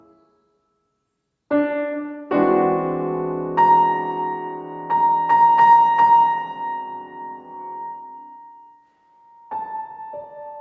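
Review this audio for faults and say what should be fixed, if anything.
Nothing in this audio needs to be fixed, as the review turns up no faults.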